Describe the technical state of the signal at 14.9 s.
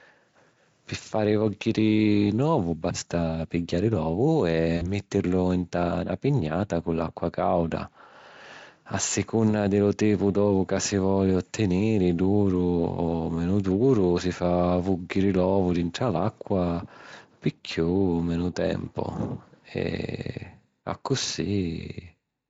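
At 14.9 s the speech is intact, with no audible fault, and the Speex coding it passes through leaves only light codec damage there.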